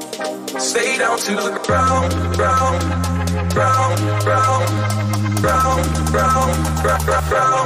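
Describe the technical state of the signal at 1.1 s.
At 1.1 s the signal is intact, with no audible fault at that point.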